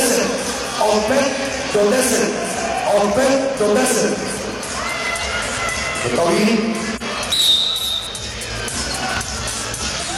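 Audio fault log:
6.92–7.03 s and 8.04–8.09 s, compressed frames skipped: whole frames never reach playback, so the audio jumps ahead by about 50 ms, then about 150 ms. The waveform shows an abrupt envelope discontinuity, and the spectrogram shows a brief vertical smudge where the texture suddenly changes.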